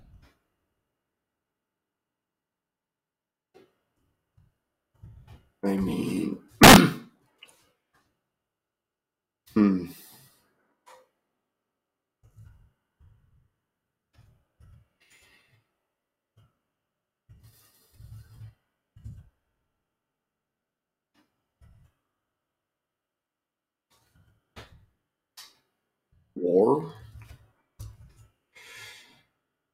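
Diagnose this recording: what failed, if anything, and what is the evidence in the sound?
An integer overflow at the sample-format conversion or fixed-point gain stage breaks the audio from 6.63 to 6.76 s. For that stretch the signal is driven about 4 dB past full scale, and instead of being held at the ceiling, each peak over the limit wraps to the opposite extreme. The result is a burst of violent, splintering cracks rather than the flattened, buzzy grit of clipping. Those full-range sign flips are what set it apart from ordinary overload.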